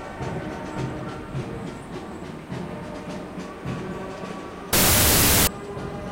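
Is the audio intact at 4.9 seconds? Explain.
No. From 4.73 to 5.47 s there is a wrong sample width fault: audio stored as 32-bit float is read back as 16-bit integer. Each four-byte float is split into two 16-bit values, so many samples are built from mismatched bytes and only some carry the top bits of the true signal. The sound becomes loud noise with the original buried inside, and because each sample is read as two, it plays at half speed, an octave low.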